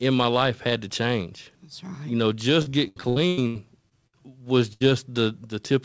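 Repeated packet loss (robotic sound) runs from 2.62 to 4.15 s. Nine separate gaps, the longest about 97 ms, were each patched by extending the preceding sound. About half a second of speech is gone, so roughly a third of that stretch is filler and sounds choppy.

A burst of packet loss follows at 4.73 to 4.82 s. About 80 ms arrived too late or not at all. The receiver stretched the last sound and faded it, and speech then resumes with that piece missing. Throughout, nothing sounds above 8 kHz, consistent with the call codec's bandwidth.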